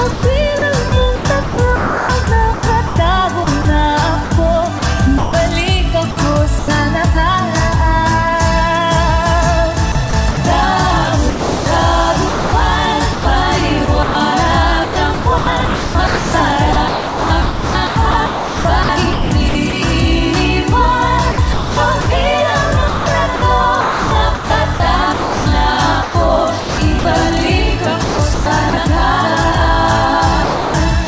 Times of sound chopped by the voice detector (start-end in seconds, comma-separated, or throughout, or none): 0.11-6.68, 9.92-10.37, 11.30-19.73, 21.32-22.07, 22.88-27.05, 28.04-28.73, 30.44-31.07